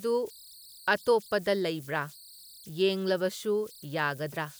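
Throughout the speech, converter idle tones sit under the sound. A tone near 4 kHz is heard in the pauses. It also turns to grainy noise beneath the sound. The error is about 24 dB below the signal, so it stays audible. The cause lies in the delta-sigma converter. With no dither, small inputs lock it into repeating bit patterns. Those patterns produce tones, and their pitch follows the input's offset.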